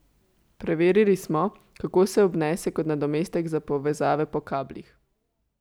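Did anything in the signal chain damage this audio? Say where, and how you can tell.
No, nothing damaged this audio.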